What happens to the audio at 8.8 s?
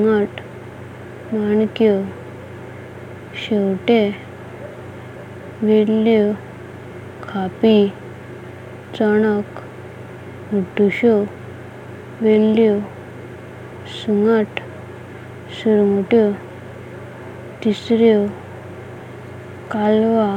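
Nothing goes wrong at 8.8 s: the speech carries on cleanly, with no dropout, click, distortion or other fault at that moment.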